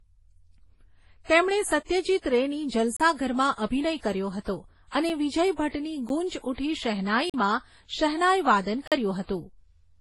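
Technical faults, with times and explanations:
Throughout: transcoding between lossy codecs. The speech carries layered, mismatched artefacts from each codec, heard together. Nothing sounds above 11.5 kHz. This likely comes from a low-bitrate MP3 passed through WMA and then a low-rate Vorbis encode, each stage encoding the previous one's damage.
2.97–3.00, 5.09, 6.09, 7.30–7.34 and 8.88–8.92 s: block of digital silence. The signal drops abruptly to silence and returns with no fade. The first gap lasts 32 ms, right after "તેમણે સત્યજીત રેની". The second, a 5 ms tick, comes after "અભિનય કર્યો હતો અને". The third lasts about 11 ms, which fits a 512-sample buffer. The last two last about 43 ms each, fitting 2048-sample buffers.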